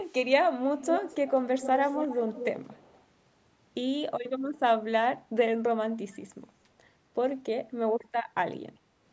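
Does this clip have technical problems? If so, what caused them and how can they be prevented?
Yes. Echo leak: a copy of the speech trailing by 243 ms is faint at 0.06–0.13 s and 6.11–6.15 s, and strong, about 10 dB below the speech, at 0.79–1.33 s and 1.57–3.03 s. The echo canceller on a loudspeaker end likely let its microphone pickup through. Using a headset on that end prevents it.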